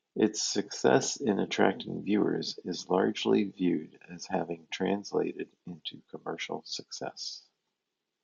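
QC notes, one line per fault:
No problems stood out on listening to this speech recording.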